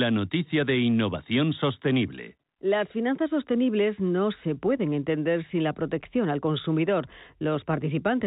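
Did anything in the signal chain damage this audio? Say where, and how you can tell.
No, the telephone coding path shows no damage here.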